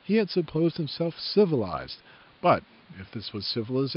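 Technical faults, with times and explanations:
Nothing stood out on listening to this speech recording; the faint room noise, about 32 dB below the speech, belongs to the space where it was recorded.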